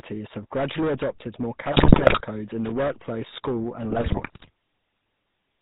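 Hard clipping runs throughout: the speech was driven about 14 dB past full scale, so roughly a tenth of samples are cut flat, giving harsh fuzz on every loud syllable. The GSM full-rate codec also runs throughout, with a buzzy, gravelly roughness and nothing above 4 kHz, consistent with the 13 kbps pulse-excited vocal-tract model. GSM bit errors strike from 1.72 to 2.22 s and from 3.90 to 4.50 s, with around 6% of bits flipped. Corrupted filter, pitch and gain values make the voice break into squawks, pops and gargling.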